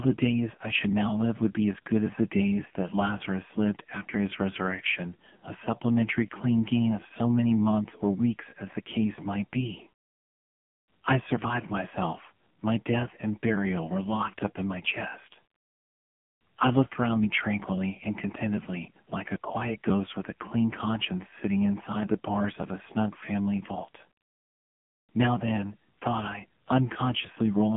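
AMR narrowband mobile codec damage runs throughout this speech: nothing passes above 3.6 kHz, and heavy buzzy, synthetic coding fits a low 6.7 kbps mode squeezing the voice into its vocal-tract model.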